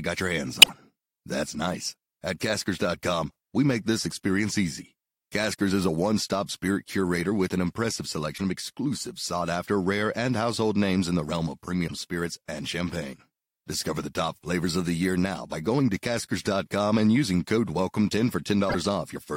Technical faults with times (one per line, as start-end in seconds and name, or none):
0.59-0.70 damaged data in a compressed stream
8.34-8.41 damaged data in a compressed stream
11.84-11.91 damaged data in a compressed stream
18.66-18.75 damaged data in a compressed stream